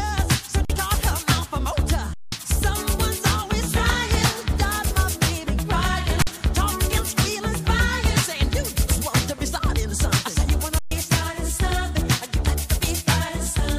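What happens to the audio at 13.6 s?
Nothing goes wrong at 13.6 s; the audio there is intact, with no dropout, click, distortion or other fault at that moment.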